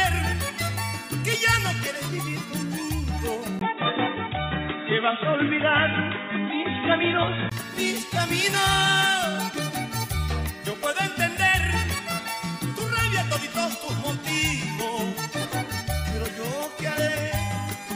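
From 3.59 s to 7.52 s the audio turns dull and boxy, with nothing above 3.8 kHz. A 20 ms gap marks the switch. The level shifts by about 5 dB, and faint new noise appears. This is likely an input switched to a poorer device.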